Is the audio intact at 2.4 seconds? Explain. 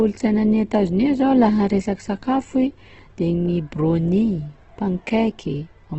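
No. At 2.4 seconds the speech carries heavy damage that runs through the whole clip. It is likely Opus compression in its music mode. Nothing is heard above about 8.2 kHz. The encoder keeps each band's energy but has too few bits for the detail. It fills bands with folded copies of lower ones or with noise. So the speech sounds rough, grainy and noisy, which fits a rate near 12 kbps.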